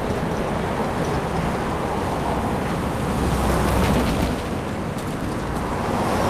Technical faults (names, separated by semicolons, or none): none